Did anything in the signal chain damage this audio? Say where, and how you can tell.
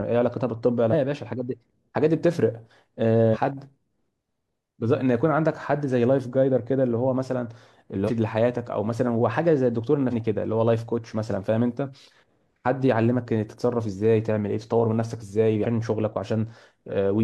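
Yes, at the codec or storage stage: damaged data in the compressed stream. Brief glitches of 50 to 70 ms break into the speech at 0.89, 3.30, 8.04, 10.08 and 15.61 s. The decoder misread corrupted frames, lost sync, and recovered at the next valid frame header.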